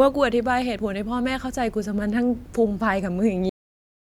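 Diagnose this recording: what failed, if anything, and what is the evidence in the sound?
Cut-off end at the storage or buffer stage: speech stops mid-sound at 3.49 s and drops straight to digital silence, with no decay, unlike a fade-out or noise gate.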